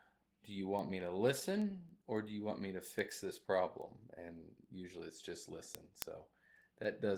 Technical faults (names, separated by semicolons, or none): Opus voice compression; word clock ticks